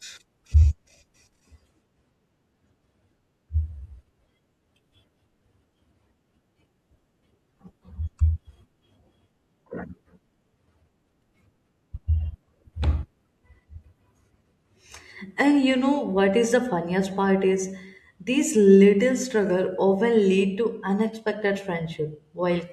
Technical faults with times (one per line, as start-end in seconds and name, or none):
none